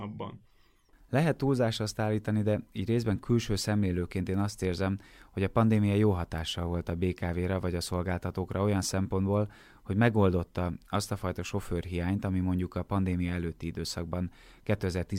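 No technical faults can be heard at any point in the speech.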